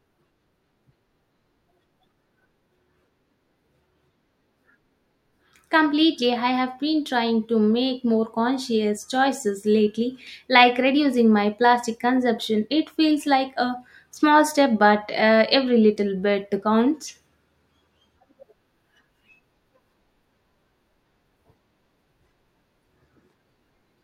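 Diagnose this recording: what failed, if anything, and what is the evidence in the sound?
Nothing in this speech recording stood out as a fault on listening.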